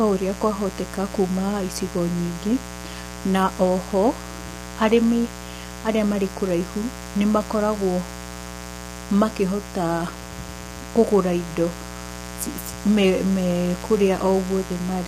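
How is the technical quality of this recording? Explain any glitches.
The recording has two problems, and both run through the whole clip from start to finish.

First, there's a mains buzz sitting under everything, built on 60 Hz. It's the kind you get when a dimmer, rectifier or unshielded cable lets sharp switching spikes into the signal twice per mains cycle, and those spikes spread into a stack of 60 Hz harmonics climbing well into the kilohertz range. You hear it as a steady, raspy buzz, roughly 15 dB below the speech.

Second, the speech itself sounds rough and grainy, with a noisy fill between the harmonics and a top end that comes across as thin or a bit synthetic. The likely cause is low-delay AAC compression, the AAC-ELD flavour used in video calls. Its very short frames can't resolve the pitch harmonics cleanly and eat up bits, and the damage here is plainly audible, which fits a low bitrate of around 32 kbps.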